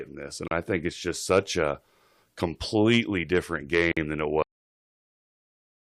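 At 0.48 to 0.51 s, just before "I think it's just", and again at 3.92 to 3.97 s, between "such a completely different" and "than it", the speech breaks for 33 ms and then 49 ms. These are gaps at a join of encoded pieces. Each segment was encoded separately and joined untrimmed, so the encoder's start-up delay and final-frame padding remain as short silences. The speech resumes exactly where it stopped, with no missing material, which distinguishes this from a dropout. Codec smearing softens the edges.

At 4.42 s, right after "than it", the speech halts mid-sound and falls straight to digital silence for the rest of the clip. This is a cut-off end: the final buffers were never written, so nothing decays or tapers. A fade-out or natural ending would trail away, but here the sound simply vanishes.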